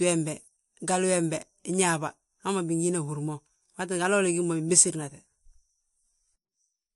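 Likely MP3 compression at a low bitrate, around 47 kbps, throughout: the speech has nothing above 11.3 kHz, and plainly audible watery, swirling artefacts run through it.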